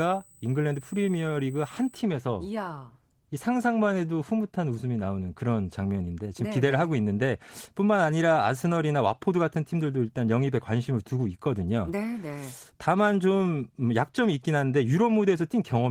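For the first 2 seconds there's USB whine, a steady 8 kHz tone sitting roughly 25 dB under the speech. It's current from the bus's 125-microsecond microframes leaking in through power or ground, and the light Opus coding keeps that thin high pitch audible.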